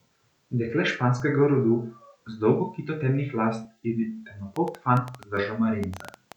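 At 1.2 s and again at 3.65 s, just after "dolgo kito temnih las", the speech jumps forward by roughly 10 ms, likely a dropped buffer (overrun) that discarded samples and butted the edges together. From 4.56 s to 6.33 s a train of clicks ticks unevenly at about 8.5 per second, around fifteen pops standing well above the speech, likely from interference or a faulty connection. A third skip of the same kind lands at 5.37 s, inside that stretch.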